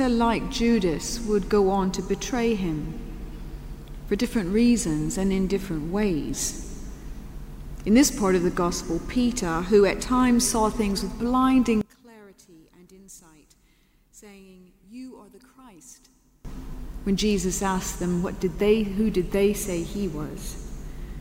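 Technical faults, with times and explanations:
11.81 to 16.45 s, one channel inverted: the sound suddenly drops by about 25 dB and goes faint. That's likely one side flipped in polarity, so everything shared between left and right cancels in the mono sum, leaving only the small differences between channels.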